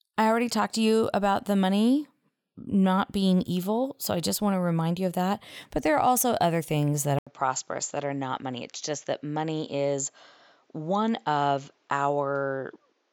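At 7.19 s the system likely switched the input to a poorer device. After an 80 ms silence the speech runs to the end band-limited at 7.6 kHz, duller and roughly 5 dB quieter, over a faint new noise floor about 45 dB down.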